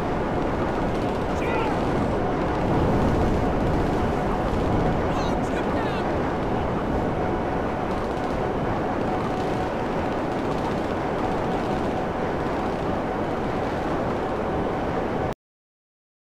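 A cut-off end at 15.33 s stops the sound abruptly mid-event, with no natural decay, and digital silence follows until the clip ends. The closing stretch of audio was never written out or played back, so the recording simply halts partway through.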